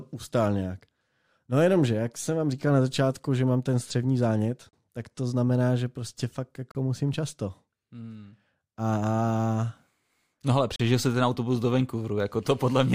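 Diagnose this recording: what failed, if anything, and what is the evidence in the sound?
The fault is at the network streaming stage: gaps between stream segments. Hard-edged silent holes of about 39, 34 and 37 ms occur at 4.69, 6.72 and 10.76 s, before "tak to znamená že", "musím často" and "jsi ten autobus do". They fall on a 2-second grid, so segment timestamps leave gaps that playback fills with silence. No audio is lost.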